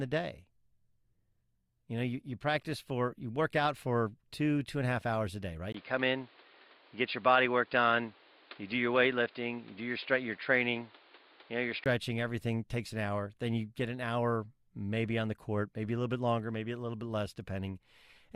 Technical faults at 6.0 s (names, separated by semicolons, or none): input switched to a poorer device